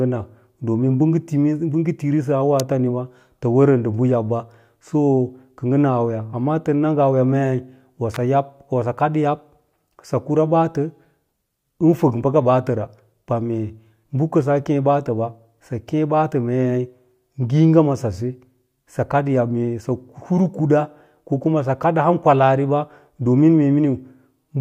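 At 2.6 s and again from 8.14 to 8.16 s, an electrical switching spike cuts into the speech as a sharp snap. It was likely picked up from a nearby switch or motor arcing. The spikes peak near about -5 dBFS and about -10 dBFS, and each shows as a thin vertical line on the waveform and a full-band vertical stripe on the spectrogram.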